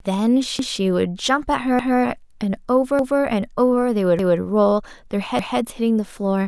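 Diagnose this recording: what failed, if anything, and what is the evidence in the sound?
Overlapping chunks in the buffering stage: a 200 ms stretch of speech plays twice at 0.59, 1.79, 2.99, 4.19 and 5.39 s, a regular stutter every 1.2 s. Each 1.0 s chunk begins 200 ms before the previous one ended, so every join repeats audio.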